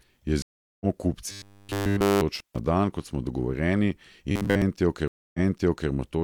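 A speech recording with several breaks. At 0.42 to 0.85 s the sound goes silent for about 0.39 s and resumes roughly half a second further on; at 5.08 to 5.90 s a 0.26 s gap is followed by a jump back of 0.56 s, repeating material. Both are stream reconnects: the connection dropped and a new decoder picked up mid-stream, once skipping ahead and once replaying a resent burst. From 1.26 to 2.21 s, and again at 4.32 to 4.62 s, the voice hardens into a metallic buzz pitched at 100 Hz while loosely tracking the speech. This robotic sound from repeated short buffers likely comes from a 10 ms block being replayed while fresh audio is missing, almost entirely in the first stretch and for roughly two-thirds of the second. At 2.35 to 2.59 s the sound cuts out with crackly edges for about 0.14 s, just before "dan kot smo", which points to an intermittent contact, a loose plug or cable briefly opening the line.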